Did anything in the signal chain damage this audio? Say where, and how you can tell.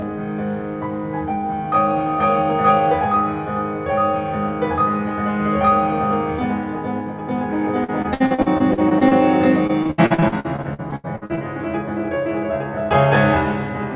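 Yes, in two places. Throughout the music there is channel delay (comb filtering). It sounds rough and slightly doubled, with fixed notches in the spectrum, which points to one channel arriving roughly 20 ms late at a driver or buffer stage before a mono sum. This differs from the plain 4 kHz top-end cut of the G.711 call codec because the notches stay put, not just the highs going missing.

At the network stage, repeated packet loss (robotic sound) occurs from 7.84 to 9.13 s and again from 9.67 to 11.39 s. The sound turns choppy, with the longest holes at 58 ms and 80 ms and about a quarter to a third of each stretch patched by extending earlier sound. A single dropout would not produce this sustained repeating pattern.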